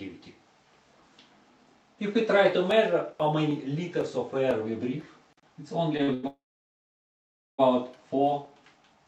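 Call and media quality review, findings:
Short stall from a late packet at 6.03–6.10 s and 6.14–6.25 s: sound held 50 ms and 94 ms, slight buzz. Jitter buffer ran empty; playback resumes in place, nothing skipped, unlike loss.

Call audio freeze at 6.27–7.60 s: held sound fades to about 1.2 s of silence. Likely a jitter-buffer underrun from delayed packets. Resumes where it stopped, so it adds a gap without cutting anything, unlike a dropout.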